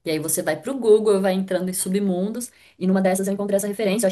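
A time-stretched section runs from 2.34 s to the end: the speech suddenly moves about 1.74 times faster while keeping its pitch, likely because software squeezed it by dropping short slices, so it sounds rushed.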